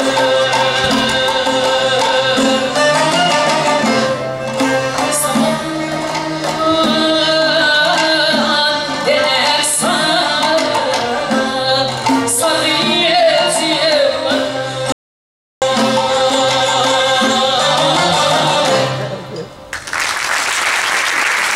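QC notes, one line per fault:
14.92–15.62 s, audio dropout to silence: the input signal was likely lost for about 0.70 s through a disconnected device, failed link or stray mute while recording continued, so the sound cuts out abruptly into a gap with no room tone, and whatever occurred there is gone.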